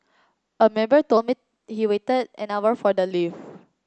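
From 1.17 s to 3.12 s the speech shows a wrong sample rate fault. The samples play back faster than they were captured, with no conversion. Speed rises 1.09 times and pitch climbs about 1.5 semitones. That fits 22 kHz audio played at 24 kHz. The voice sounds slightly high and hurried.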